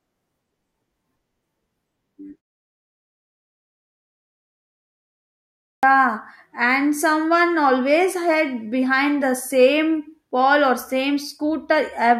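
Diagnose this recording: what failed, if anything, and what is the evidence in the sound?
After a 3.4 s pause, speech at 5.71 s starts abruptly, its first 0.12 s swallowed: a clipped start after a pause, the idle playback device waking late.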